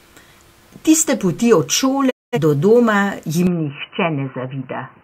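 A speech recording with a digital broadcast dropout from 2.09 to 2.38 s, between "poti od" and "do doma". The audio fades out over about 20 ms into roughly 213 ms of muted silence, a gap that fits about five failed frames. The waveform shows a flat hole, and the spectrogram a blank vertical band. From 3.47 s to the end, the sound abruptly turns duller and slightly quieter with no gap, most likely an input switched to a poorer device. The spectrogram shows nothing above 3 kHz, and a new noise floor sits roughly 40 dB under the speech.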